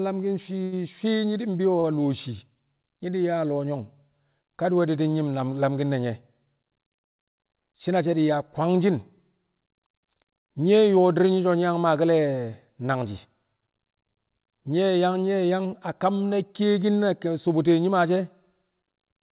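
At 0.64 to 0.75 s and again at 1.80 to 1.87 s, a packet arrived late and the jitter buffer ran dry, causing a short stall. The receiver held the last sound for about 81 ms, then 36 ms, so the speech drags briefly with a faint buzz or dip. Nothing above 4 kHz comes through the G.711 call path.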